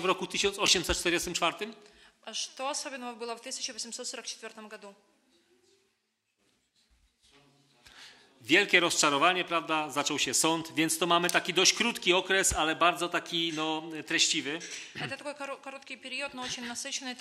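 Right near the start, around 0.66 to 0.68 s, there's a brief case of chunks out of order. One 10 ms chunk of audio got delivered or written a single slot late, so it plays after the chunk that should have come next. Nothing actually goes missing; the two pieces just swap places. That creates three hard joins in about 20 ms, and you hear it as a tiny jumbled flick.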